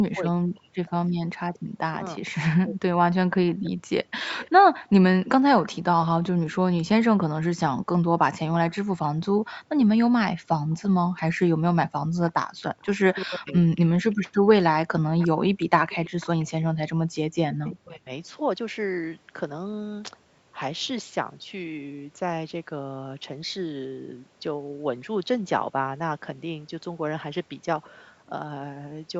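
From 0.0 to 2.95 s, the echo canceller likely mistook simultaneous talk from both ends for loudspeaker echo and turned everything down. This is speech suppressed in double talk: about a second of the speech dips by as much as about 40 dB.

Between 3.47 and 5.69 s, again from 8.7 to 9.1 s, and through a longer stretch from 10.7 to 17.76 s, there is echo leak, likely from the far end's canceller letting loudspeaker sound back into its microphone. A faint copy of the speech trails 341 ms behind, about 25 dB down at first and about 20 dB down in the long stretch.

Inside that stretch, from 13.24 to 13.61 s, and again from 17.75 to 18.11 s, double-talk suppression likely clamps down once more, cutting the speech by about 40 dB for roughly 0.4 s each time.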